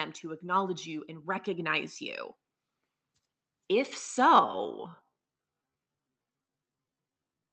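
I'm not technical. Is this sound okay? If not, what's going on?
No. From 0.21 to 1.98 s, automatic gain rising makes the voice and background swell together. The level control judged the input too quiet and turned it up. From 4.31 s to the end, a time-stretched section plays at roughly half speed with unchanged pitch, so it drags. Software likely stretched it to fill a set length.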